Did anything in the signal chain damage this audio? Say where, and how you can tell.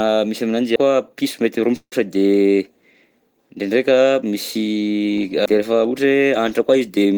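Yes. There are two CD skips, at 0.76 s and 5.46 s. Each sounds like a small tick where the audio drops out for only a few milliseconds and then carries on from a slightly different place, with no smooth join across the cut. This points to the playback stage. The laser lost its track on the disc's spiral and landed on another turn. The player briefly muted and then resumed reading from the new position.

From 1.76 s to 1.93 s there is a call audio freeze. The last sound is held over as a fading buzz or hiss, and about 70 ms of that stretch is silent. The speech then resumes exactly where it stopped, with nothing missing. The pause simply adds 155 ms of delay. This is likely a network stall on the call path: packets arrived late, the jitter buffer ran dry, and the receiver filled the gap until they came in.

From 6.54 s to 7.14 s the speech suddenly sounds hurried while its pitch stays the same. 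This is a jitter buffer speed-up running at about 116% of normal pace. After a backlog of audio built up in the buffer, the receiver trimmed out short pitch-period-sized pieces, one after another, to bring the delay back down. Together those cuts remove about a tenth of a second of audio, which is why the delivery sounds rushed.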